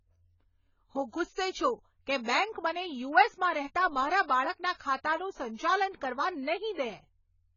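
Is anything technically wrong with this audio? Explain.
Yes. Throughout the speech, the audio was likely squeezed through AAC compression at a very low rate, consistent with around 16 kbps AAC-LC. Starved of bits, the encoder drops everything above 7 kHz and coarsely quantises what remains, so the sound is dull and smeared, with a warbling, fizzy texture on sibilants and held sounds.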